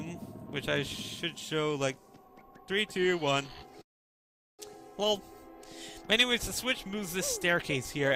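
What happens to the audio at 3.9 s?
A call audio freeze runs from 3.81 to 4.61 s, going silent almost at once, likely from delayed packets draining the jitter buffer; audio then resumes about 0.77 s late, nothing lost.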